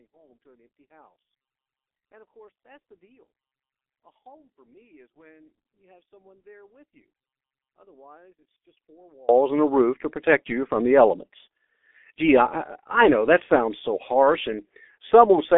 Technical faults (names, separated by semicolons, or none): G.723.1 codec; one channel inverted